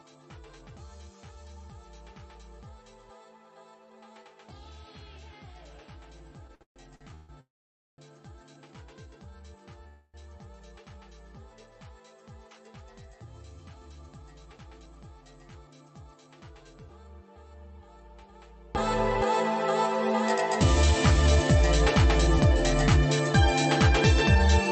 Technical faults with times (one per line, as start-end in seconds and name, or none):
0.00-18.75 one channel inverted
6.47-7.31 repeated stalls (stutter)
7.41-8.00 call audio freeze
8.54-8.74 jitter buffer slow-down
9.88-10.16 call audio freeze
14.56-14.87 jitter buffer speed-up
20.82-24.36 jitter buffer speed-up